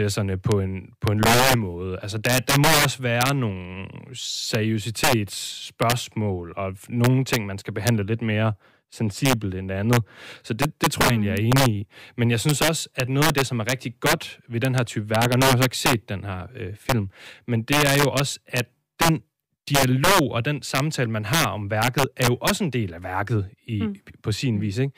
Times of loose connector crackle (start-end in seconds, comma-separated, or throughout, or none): none